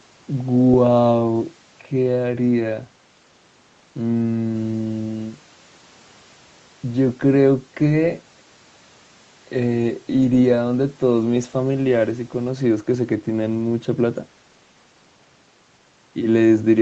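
No technical faults occur anywhere in the speech, so there is nothing to place in time order.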